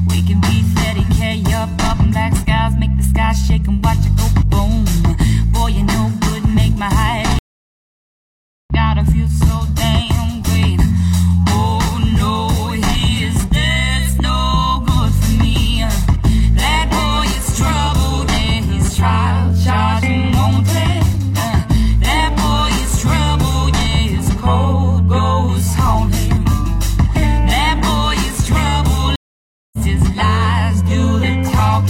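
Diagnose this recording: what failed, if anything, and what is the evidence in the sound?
Network stage: a stream reconnect, twice. Silence runs from 7.39 to 8.72 s, then the audio resumes about a second further on. A second gap, from 29.16 to 29.78 s, skips ahead roughly 0.3 s. Each time, the connection dropped and a fresh decoder rejoined mid-stream.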